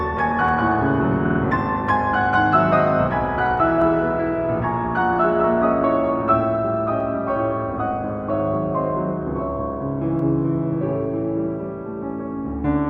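The audio has regular clicks from about 0.49 s to 10.19 s. They recur every 3.19 s, roughly four in all. These are clock drift buffer slips. The likely cause is two devices running on separate clocks about 50 ppm apart, so a buffer drifts until a handful of samples is dropped or repeated. At 1.25 s there are repeated frames. A 50 ms stretch plays three extra times, giving a brief stutter. That block points to a few compressed frames being sent more than once. The repeats end at 1.40 s and add 150 ms to the audio.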